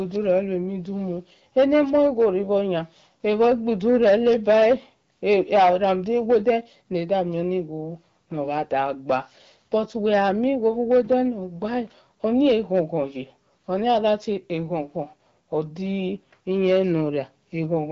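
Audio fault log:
throughout, hard clipping: speech driven about 10 dB too hot has a small share of peaks cut flat, giving abrupt crackle on loud syllables, unlike gentle soft-saturation warmth.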